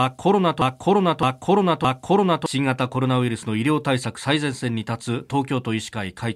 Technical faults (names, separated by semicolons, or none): broken-record loop